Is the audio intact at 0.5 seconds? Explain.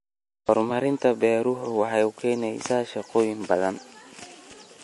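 No. Just before that moment, from 0.45 to 0.49 s, there is pre-echo. A transform codec spreads quantisation noise across its whole block, so when a sharp onset lands late in a block, noise scaled to the loud part fills the quiet gap ahead of it. A short hiss of about 31 ms leads into the onset, which sounds blunted. On a waveform, a fuzzy low-level smear precedes the attack; a spectrogram shows a broadband haze before the onset's vertical edge.

The whole speech clip, including 0.5 s, also carries plainly audible damage, likely from MP3 compression at a low bitrate, which fits roughly 48 kbps. Short of bits, the encoder cuts all treble above 11.4 kHz and drops weak frequency lines that flicker between frames, giving a watery, swirly texture and metallic chirps on s sounds. A spectrogram shows a hard flat ceiling at 11.4 kHz, with scattered holes and blocky patches below it.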